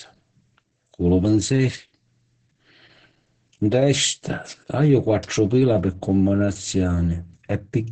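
From start to finish the speech carries heavy Opus voice compression. The SILK linear-prediction coder has rebuilt the voice from coarse excitation, so it sounds muffled, hoarse and faintly robotic, which fits a rate near 10 kbps with 20 ms frames. A spectrogram shows a hard ceiling at 8.8 kHz with nothing above it, and smeared harmonics below. The waveform looks smoothed, with softened consonant onsets.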